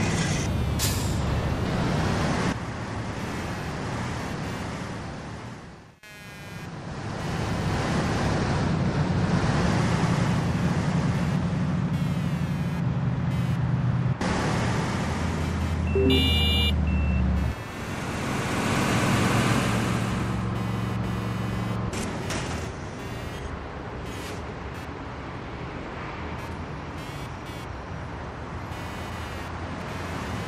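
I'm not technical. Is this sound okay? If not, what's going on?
No. Throughout, there's computer activity noise: a buzzy chirp of roughly 200 pulses a second from the computer's circuits, rising and falling with what the computer does, not with the audio.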